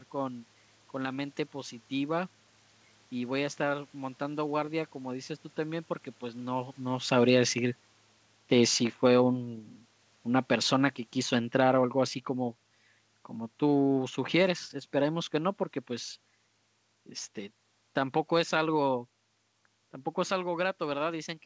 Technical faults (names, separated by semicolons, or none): automatic gain falling